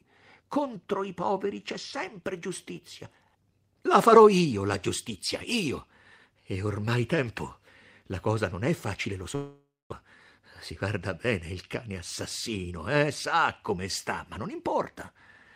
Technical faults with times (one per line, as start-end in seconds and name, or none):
9.35-9.94 long network dropout
10.01-11.90 jitter buffer speed-up
12.48-12.96 jitter buffer speed-up